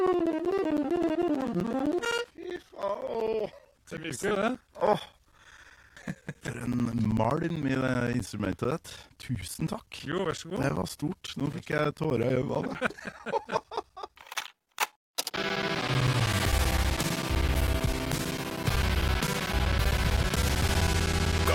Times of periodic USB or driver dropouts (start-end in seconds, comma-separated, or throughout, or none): 0.07-21.45